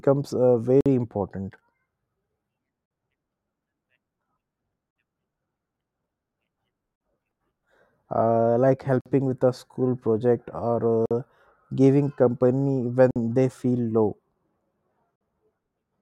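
Gaps between chunks break up this speech recording at 0.81, 2.86, 4.91, 6.96, 9.01 (just before "with a school project"), 11.06 (just after "with a school project"), 13.11 (between "giving company" and "they feel low") and 15.16 s. Each is a 50 ms silence. The holes recur every 2 s, which points to audio delivered in 2-second chunks with silence inserted at each join. Nothing is lost, but the sound is interrupted at every boundary.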